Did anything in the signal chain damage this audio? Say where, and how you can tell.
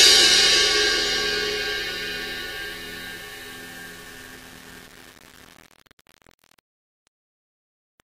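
Yes. Across the whole clip the sounds carry a grainy, gritty distortion that rises and falls with the signal, harshest on quiet passages. That points to low bit depth without dither at a sample-format conversion, likely a rounding to about 7 bits, leaving error only about 25 dB below the signal.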